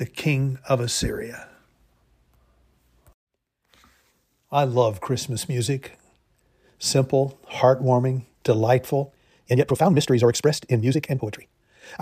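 From 9.04 s to the end at 12.01 s the speech suddenly runs about 1.92 times faster at unchanged pitch, a time-stretched section, likely from software dropping short pieces to shorten it. It sounds rushed; the spectrogram shows compressed syllables, unshifted harmonics and small splice breaks.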